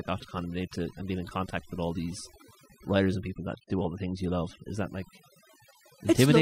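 From start to finish the background sits in near silence broken by twinkling specks. This is overdone noise removal: a noise reducer set too hard cuts individual frequency bands whenever they approach its noise estimate, taking quieter parts of the voice with them.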